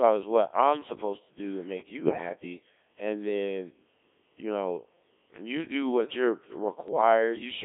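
Speech run through the Codec 2 vocoder, and it's heavily mangled the whole way. The voice is rebuilt from sine waves using only pitch, voicing, level and a spectral envelope, so it comes out robotic and buzzy in a narrow band of roughly 250 Hz to 3.6 kHz, which fits a 1.3 kbit/s mode. On top of that there are bit errors on digital voice radio at 2.04–2.29 s and again at 6.88–7.01 s. Several percent of the bits look flipped, and each bit steers a whole frame's parameters, so the voice lurches in pitch, level and tone and breaks into warbly, bleepy gibberish.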